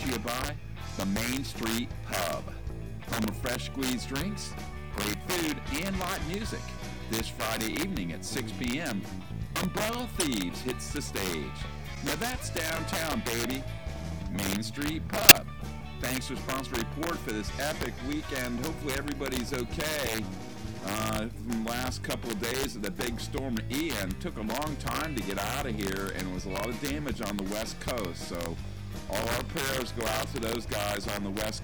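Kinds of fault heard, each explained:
Integer overflow: the signal is driven about 9 dB past the largest integer value, and instead of being limited each peak wraps to the opposite sign. Under one percent of samples go over, but each loud peak produces a violent crack far sharper than clipping, throughout the clip.
Corrupt frame decoded: damaged compressed frames were played without being concealed, so misread gains and codes put energy at wrong frequencies for roughly a frame each. Short blips and bursts occur at 10.2, 11.95–11.98, 15.29–15.36 and 30.22–30.26 s, the 15.3 s one loudest.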